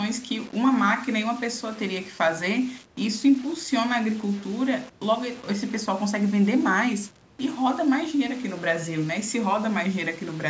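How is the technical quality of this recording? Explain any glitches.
The technical quality is poor. A coarse grain sits on the speech from start to finish. Throughout the clip, quiet passages sound gritty and the softest moments break up or sputter. The distortion moves with the sound rather than sitting underneath it as steady hiss. The likely cause is low bit depth without dither. The level seems held to about 6 bits and rounded to the nearest step. The error then tracks the signal, about 20 dB below it. The band stops at 8 kHz, consistent with call microphone processing.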